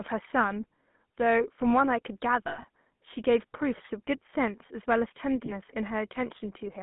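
Throughout the speech, the GSM full-rate codec is plainly audible. The voice is rebuilt from a vocal-tract model driven by a sparse, regularly spaced pulse excitation, which fits 13 kbps full-rate coding. That gives the familiar buzzy, gravelly texture. The line band runs from 150 Hz to 3.5 kHz, so the low body and everything above 3.5 kHz are gone, leaving a thin, boxy telephone sound.

From 2.48 to 2.65 s there are lost GSM frames: 120 ms of audio is missing, scattered across 160 ms, with the longest gap about a tenth of a second. The decoder fills each gap by repeating the last good frame, so the sound freezes into a rough, metallic ring before normal speech resumes.

At 5.46 to 5.52 s a further lost GSM frame of 20 ms is concealed the same way, heard as a brief metallic smear.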